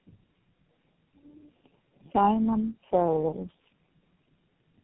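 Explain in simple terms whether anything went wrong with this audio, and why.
Tandem speech coding affects the whole clip: the speech sounds rough, muffled and warbly, with nothing above 3.8 kHz. It sounds as if the call passed through four phone-network speech coders in turn, each squeezing sound already damaged by the one before.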